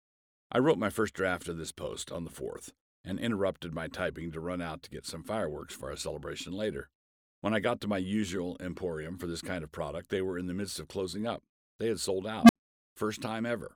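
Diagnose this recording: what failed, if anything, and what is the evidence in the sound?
Call processing failed with an unstable filter. Just after "had sold", at 12.43 s, a low tone near 200 Hz swells over 61 ms and clips. Silence follows for 65 ms, to 12.56 s. A recursive filter with bad coefficients ran away, overflowed and reset.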